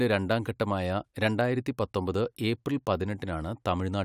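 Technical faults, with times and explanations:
No technical faults found anywhere in the speech recording.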